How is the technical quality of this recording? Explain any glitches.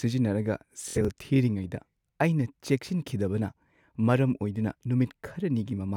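The speech has one clear glitch: a Bluetooth stutter between 0.88 and 1.09 s, just before "ꯊꯤꯔꯤꯉꯩꯗ ꯑꯩꯅ ꯆꯦꯛꯁꯤꯟꯈꯤꯗꯕꯅ". Some wireless packets didn't arrive in time, so the receiver kept replaying its last short slice of audio until fresh data turned up. You hear a brief buzzy, machine-gun flutter. About 116 ms of the audio is lost across roughly 186 ms, the longest gap being about 70 ms, which points to a handful of dropped packets. Then the speech picks up further along, as if it had kept playing underneath.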